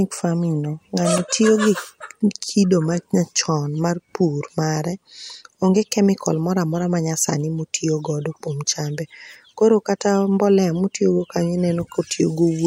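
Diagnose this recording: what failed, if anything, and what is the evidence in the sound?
No failure detected at any stage, from capture and conversion through to playback; the speech carries no audible fault.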